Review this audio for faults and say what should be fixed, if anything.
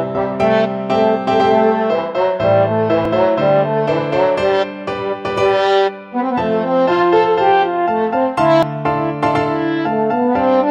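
A dropped buffer (overrun) is heard at 3.05 s and 8.63 s: a jump where roughly 20 ms of sound is skipped, likely from samples overwritten before being read. Giving the capture thread higher priority or a larger buffer should stop these overruns.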